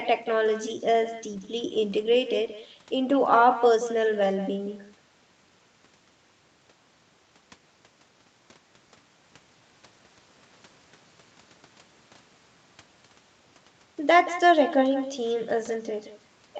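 Speech with an uncancelled echo throughout: each syllable returns about a fifth of a second later, roughly 13 dB quieter, showing as faint trailing ghost copies on the spectrogram.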